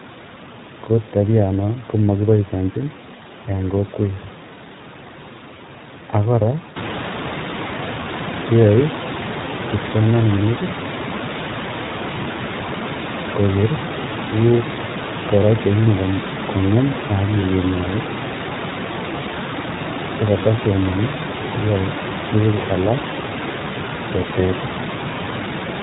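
The speech has passed through the iLBC codec. Each short frame's excitation was coded on its own, and the coded band stops at 4 kHz. The damage is plainly audible throughout: the speech loses all brightness above that limit and takes on a rough, slightly synthetic edge. The character fits iLBC's 20 ms frame mode at about 15.2 kbps. The room noise that rises by about 13 dB at roughly 7 s also comes through coarsened.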